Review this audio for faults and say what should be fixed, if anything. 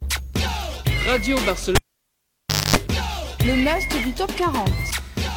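At 1.75 to 2.76 s, a cable pulled and plugged in gives a pop, about 0.96 s of near silence including roughly 0.24 s of 50 Hz mains buzz, then a second pop.

At 2.88 s, a gap between stream segments leaves a hard-edged hole of about 6.5 ms where segment time stamps fail to meet.

Secure connectors before recording, and make each segment's time stamps follow on exactly from the one before.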